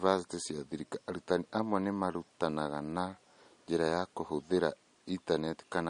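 From start to end the speech carries plainly audible damage, likely from MP3 compression at a low bitrate, roughly what 42 kbps gives. Nothing sits above 10.1 kHz, a flat ceiling on the spectrogram, and weak detail below it flickers on and off in patches, sounding watery with metallic chirps on s sounds.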